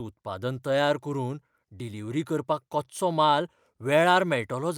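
No technical faults are audible.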